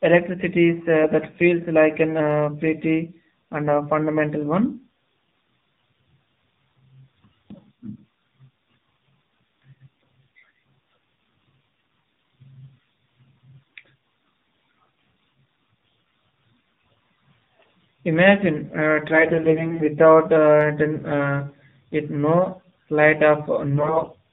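AMR narrowband mobile codec, throughout the clip: the speech has passed through the 2G/3G mobile speech codec, which samples at 8 kHz, so nothing above 4 kHz survives. Each 20 ms frame drives a vocal-tract model with a handful of pulses per 5 ms subframe. The damage is plainly audible: a muffled, buzzy, somewhat synthetic voice, which fits a low AMR-NB mode of about 7.4 kbps, where too few bits leave the excitation coarse.

AMR bit errors, from 19.10 to 19.90 s and again from 23.74 to 24.14 s: on a weak link the less protected bits of many frames arrived flipped, at roughly 7 percent, while the checks on the essential bits still passed. The damage points to about 40 frames in the first stretch and 19 in the second. The excitation pulses land in the wrong places and the fine pitch, gain and spectral values drift, so the voice keeps roughly its pitch and level but turns hoarse, scratchy and gargly.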